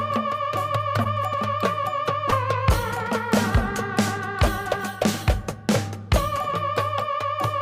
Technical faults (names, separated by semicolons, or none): short concealed packet loss